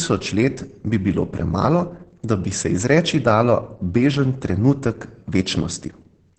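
Right through the speech there's heavy Opus voice compression, with the SILK linear-prediction coder doing all the work in wideband mode. The band is squeezed down, so the top end is gone, and the excitation is coded coarsely in 20 ms frames. You hear it as muffled, hoarse, faintly robotic speech, and the damage level points to a bitrate of about 10 kbps.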